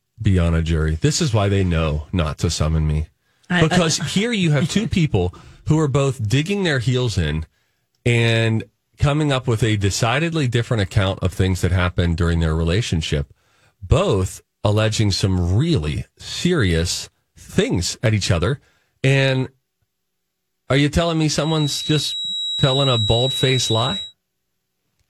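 A speech recording where the speaker-to-microphone loop likely hovered at the edge of feedback, causing a feedback whistle: a thin, slowly swelling and fading 3.9 kHz tone about 5 dB under the voice from 21.34 to 24.15 s, right after "are you telling me".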